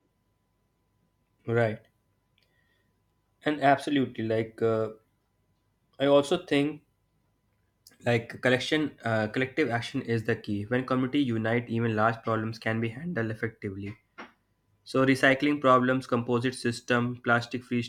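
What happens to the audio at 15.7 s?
Nothing goes wrong at 15.7 s: the speech carries on intact through that moment, with no dropout, click or distortion.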